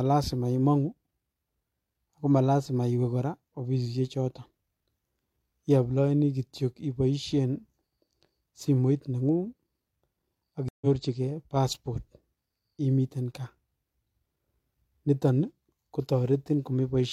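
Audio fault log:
10.68–10.86 s, stream reconnect: the connection dropped and the player fell silent for 128 ms, then reconnected and restarted its decoder mid-stream, so the speech resumes about 150 ms further on and that stretch is skipped. On a waveform this shows as a flat gap with a clean edge before it and a fade-in after it. A spectrogram shows a blank vertical band across all frequencies, followed by a soft onset as the new decoder starts.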